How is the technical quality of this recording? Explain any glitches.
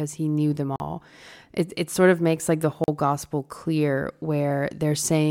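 The speech is interrupted twice by brief dropouts. At 0.76 s, right after "he knew them", and at 2.84 s, between "of makes like the" and "gospel clear", the sound snaps to a 40 ms hole. Each is a block of digital silence: samples replaced by zeros with no fade, most likely because the output buffer wasn't filled in time.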